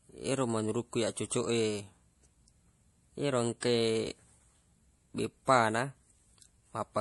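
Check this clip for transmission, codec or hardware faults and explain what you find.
Two codec faults are audible. Throughout the speech there is a watery, swirling quality, sibilants turn metallic and chirpy, and nothing is heard above 11.4 kHz. This is plainly audible MP3 compression, likely from an encoder starved of bits, which fits a bitrate around 48 kbps. Short of bits, it cuts the treble at a fixed frequency and zeroes weak frequency lines that flicker on and off between frames, producing the swirl and chirps.

At 3.61 s a short hiss of about 18 ms comes just before a sharp attack, which sounds softened and smeared. This is pre-echo. The transform codec spreads its quantisation noise across a whole block, and because this attack sits late in its block, noise scaled for the loud onset also spills into the quiet moment before it, where nothing masks it.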